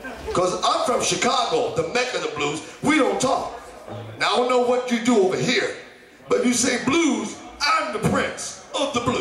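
No technical faults are audible.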